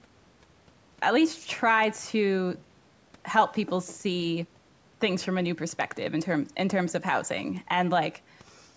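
Nothing in the speech stood out as a fault on listening, with the top end stopping around 8 kHz as expected from the call's microphone processing.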